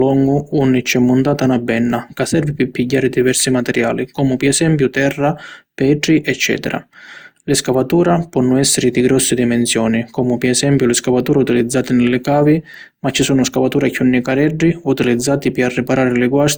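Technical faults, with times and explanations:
Throughout: generation loss. Swirly, hollow speech with blurred onsets, likely from repeated lossy re-encoding at about 64 kbit/s. The spectrogram shows nothing above 20.2 kHz.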